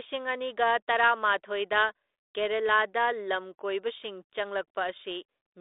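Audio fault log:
No fault for this speech clip.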